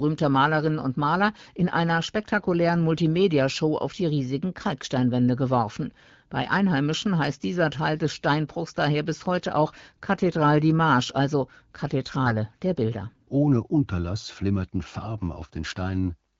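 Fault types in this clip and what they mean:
AMR bit errors: Over a weak link, roughly one bit in twenty in the lightly protected part of each AMR-WB frame arrived flipped, but the check on the critical bits still passed, so the decoder used the damaged frames. Its excitation pulses and fine pitch, gain and spectral values went wrong. From 12.26 to 12.34 s, about four 20 ms frames, the speech keeps its rough pitch and level but turns hoarse, scratchy and gargly.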